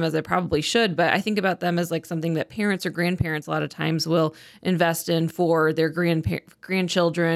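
No technical faults can be heard anywhere in this speech recording.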